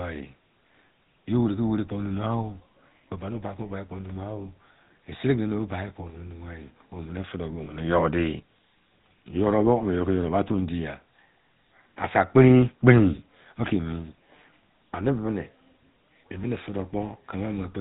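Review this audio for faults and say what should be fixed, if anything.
The whole clip has passed through the GSM full-rate codec, which rebuilds speech from a vocal-tract model driven by sparse regular pulses and discards everything above 4 kHz. The result is a plainly audible buzzy, gravelly roughness with a dull top end, consistent with 13 kbps full-rate GSM. To prevent it, route the audio through a wideband codec such as AMR-WB or Opus instead of legacy full-rate GSM.

From 7.64 to 7.67 s there are lost GSM frames. The decoder lost a frame and filled the gap by repeating the previous frame's parameters. This produces a brief rough, metallic ring, and the short length fits a single 20 ms frame. To prevent it, strengthen the radio link or apply error protection and jitter buffering so that frames arrive intact.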